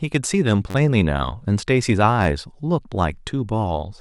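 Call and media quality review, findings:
Repeated buffer: brief buzz 0.70–0.75 s, click 2.24 s. Underrun replays 10.7 ms block (fits 512-sample buffer). Waveform: identical tiled segments. Spectrogram: vertical lines at joins.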